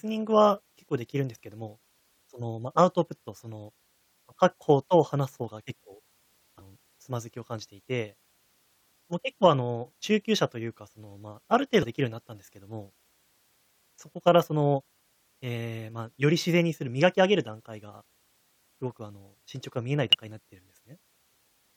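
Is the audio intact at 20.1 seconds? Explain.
No. Compressed frames are skipped from 20.13 to 20.15 s. Whole frames were missing or rejected by the decoder, so the speech jumps ahead by roughly 70 ms. The join is heard as an abrupt jump in the speech.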